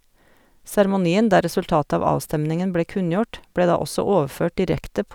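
No technical faults can be heard.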